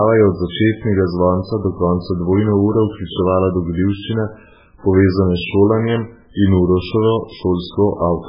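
Throughout the speech, nothing sits above 5.3 kHz, so it sounds dull and muffled. A spectrogram shows a hard, flat ceiling with empty space above. This is likely low-bitrate audio saved at a high bitrate: a very-low-bitrate MP3's losses survive a later high-bitrate copy.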